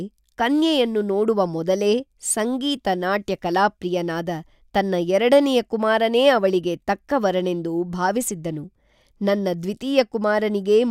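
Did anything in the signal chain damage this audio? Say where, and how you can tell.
No, nothing damaged this audio.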